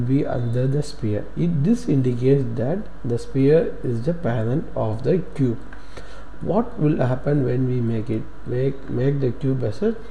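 Nothing stood out on listening; no technical problems could be heard anywhere in the audio.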